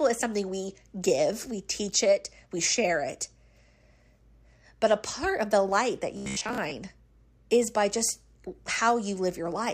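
Speech, with robotic sound from repeated short buffers between 6.17 and 6.76 s. Over that stretch the speech becomes a rigid, metallic buzz at about 66.7 Hz. The words still roughly follow through it. The likely cause is audio arriving too seldom, so the playback repeats its last buffer to fill each gap. The buzz frequency points to a buffer near 15 ms long. About half the sound in that span is repeated material, with the real audio skipped.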